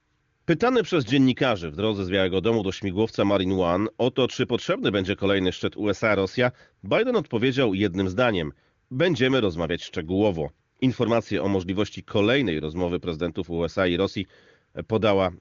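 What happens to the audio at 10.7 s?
Nothing goes wrong at 10.7 s: the speech passes through intact there, carried as normal by the AMR wideband (HD Voice) codec.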